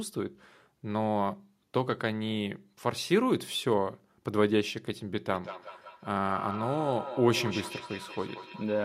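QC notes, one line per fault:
5.29 to 8.85 s, feedback echo between two devices: the speech comes back at a steady interval of about a fifth of a second, peaking about 11 dB below the direct sound, because a second nearby device replays it into a microphone whose echo canceller only removes its own playback.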